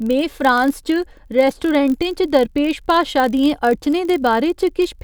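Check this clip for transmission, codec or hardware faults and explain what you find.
One fault runs through the whole speech clip.

Block size mismatch (padded), present throughout: one stage hands over blocks slightly shorter than the next stage reads, and each block's shortfall is filled with zeros. The resulting tiny gap in every block gives a steady buzz at about 46.9 Hz, which fits a 1024-sample read block. Because the gaps are so small, playback runs at 0.999 times normal speed, and the timbre stays.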